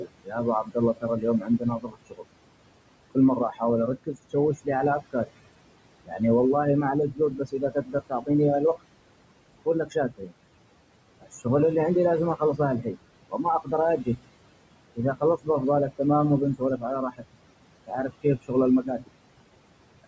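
Overdone noise removal runs through the whole clip. The noise reduction is set far too strong. Bands near its noise estimate are pushed down or switched off. The background drops and breaks up into twinkling specks.

Noise suppressor artifacts are also present throughout. The suppressor lowers steady noise by about 21 dB, frame by frame. Room noise, about 15 dB below the speech, sinks in the gaps and rises under the speech.

Speech cut by the noise suppressor appears from 0.0 to 11.46 s. The suppressor mistakes parts of the speech for noise. Soft consonants and word endings drop by up to about 22 dB. About two seconds in total sound swallowed or faint.

It happens again from 12.39 to 19.1 s. Here the drops reach about 21 dB. Roughly one second in total is affected. Quiet sounds and endings go under with the background. The call microphone processing leaves nothing above 8 kHz.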